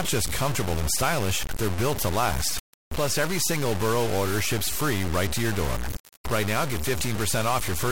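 Throughout the speech, gritty distortion follows the signal, likely low bit depth without dither, near 3 bits. The waveform shows coarse stair-steps, and the spectrogram shows broadband haze.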